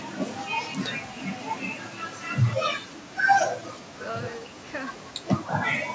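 From 2.61 to 2.94 s and 3.46 to 3.93 s, the speech drops by about 40 dB. The likely cause is speech suppressed in double talk: the echo canceller mistook overlapping talk for echo. Similar dips follow at 4.41 to 4.58 s, shallower at about 20 dB, and from 5.74 s to the end.

From 3.89 to 3.98 s, a faint copy of the voice trails 224 ms behind, about 25 dB below the speech. This is likely echo leak: loudspeaker sound reached the far microphone and slipped past its canceller.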